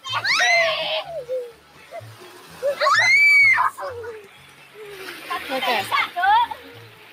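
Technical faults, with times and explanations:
Throughout: noise suppressor applied to music or sounds. A suppressor tuned for speech stays engaged on material it was never meant for, treating sustained tones, room ambience and reverb as noise to be removed. Its gain keeps moving by roughly 10 dB, so sharp onsets pass while anything held or decaying gets pulled down. The result is a pumping, unsteady level and a thinner body, with tails shrinking where they should ring on.
1.51–1.93 s, 2.12–2.62 s, 4.21–4.94 s, 5.14–5.30 s, 6.54 s to the end: sound cut by the noise suppressor. In each span the suppressor judges the sustained or fading sound to be noise and clamps it harder than its surroundings, by about 9 dB at 1.51, 4.21 and 6.54 s, about 7 dB at 2.12 s and about 5 dB at 5.14 s. The level dips audibly and decays are clipped short, while any sudden attack inside these spans still comes through largely intact.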